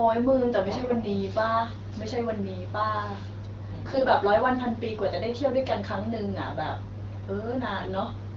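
AMR bit errors corrupted the weakly protected bits of the AMR-WB frames at 0.77–0.96 s, 3.86–4.08 s and 7.77–7.88 s, at a rate of a few percent. Misplaced excitation pulses and skewed gain and spectral values leave pitch and level roughly intact, but the speech briefly turns hoarse, scratchy and gargly.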